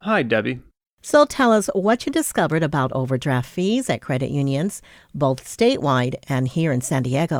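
Speech recording with no audible technical faults.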